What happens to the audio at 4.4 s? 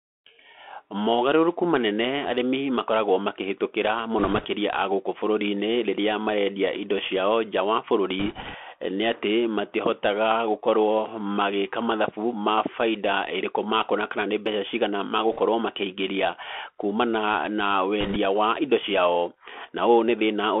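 Right after "arĩmi makoragwo makĩhĩtũkĩra", from 4.19 to 4.46 s, bit errors on a Bluetooth voice link scatter a rushing, crackly noise over the speech. At a few percent error rate, each flipped CVSD bit nudges the waveform only slightly, so you get a rushing crackle rather than loud clicks. Underneath, the Bluetooth CVSD headset codec runs throughout: the audio is squeezed into roughly 250 Hz to 3.4 kHz, with grainy hiss and scratchy s sounds.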